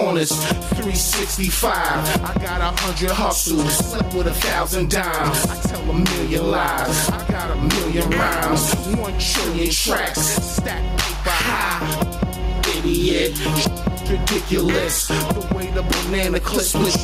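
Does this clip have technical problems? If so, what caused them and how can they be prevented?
Yes. Gain pumping runs through the whole clip: the level swings by roughly 10 dB, ducking under each loud sound and rising again in the gaps, so loud and soft passages sit unnaturally close in level. This points to a likely cause of input gain set far too high with a fast limiter or compressor clamping down on each loud moment. That breathing movement, rather than flattened, distorted waveform tops, separates it from plain clipping. Setting input gain with proper headroom prevents it.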